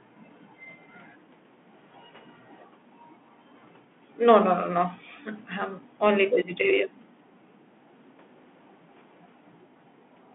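From start to finish the speech carries the sound of a Bluetooth CVSD headset codec. The band runs only from about 200 Hz to 3.4 kHz, and a grainy hiss sits under everything, which fits CVSD's one-bit delta coding at 64 kbps. Its adaptive step size can't keep up with fast, loud rises, so s sounds come out scratchy and bright peaks smear. A plain telephone band-limit would sound narrow but clean, without that granular noise.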